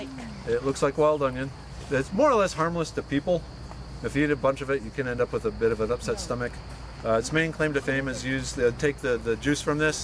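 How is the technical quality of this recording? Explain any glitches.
Nothing stood out on listening to the recording; there were no glitches to explain.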